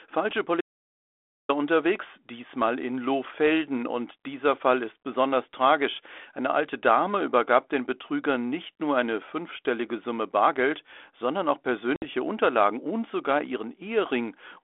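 From 0.61 to 1.49 s the speech cuts out to silence for about 0.88 s, with no room tone underneath, then resumes at "unterwegs diesmal in". This audio dropout to silence is likely a lost input while recording continued writing silence.

At 11.96 s, just after "sondern auch", packet loss on an ADPCM call opens a hard-edged 60 ms hole, roughly three packets. The 32 kbit/s G.726 decoder's predictor and step size lose step, so speech returns at 12.03 s slightly distorted.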